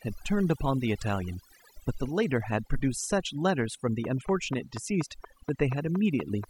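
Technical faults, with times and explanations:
Throughout: overdone noise removal. A noise reduction stage was pushed too hard on a noisy recording, so any frequency band sitting near its noise estimate is pulled far down or shut off, and the softer parts of the speech are taken along with it. The result is a background that drops to near silence dotted with twinkling, chirpy specks.
4.04 to 6.45 s: train of clicks. A repeating pulse gets into the signal, likely interference from nearby equipment or a faulty connection, firing at a regular 4.2 clicks per second for about ten clicks. Each click has much the same shape and peaks roughly 10 dB above the speech, so the run is heard as a steady ticking laid over the voice that carries on through the pauses as well.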